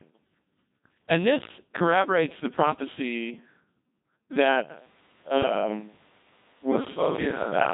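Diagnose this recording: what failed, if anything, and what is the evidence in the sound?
The failure is at the codec stage: the speech passed through a Codec 2 vocoder, and the heavy damage fits its 2.4 kbit/s mode. From start to finish the voice sounds robotic and buzzy, with nothing above about 3.8 kHz. Only pitch, voicing, energy and a coarse spectral envelope survive the link. The decoder rebuilds the voice from sine waves rather than the original waveform, so natural texture and detail are gone for the whole recording.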